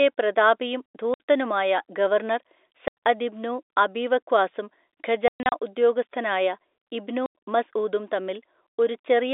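Packet loss filled with silence cuts the speech at 1.14 s (60 ms), 2.88 s (90 ms), 5.28–5.52 s (180 ms in gaps up to 120 ms, before "ഉദ്യോഗസ്ഥനായ ഇബ്നു മസ്ഊദും") and 7.26 s (90 ms, after "ഉദ്യോഗസ്ഥനായ ഇബ്നു"). Gap lengths fit 30 ms packets. Each gap is dead silence with hard edges, heard through a narrow telephone band.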